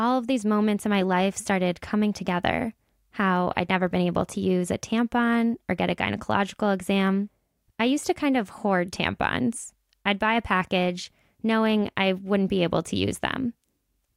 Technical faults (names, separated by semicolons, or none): none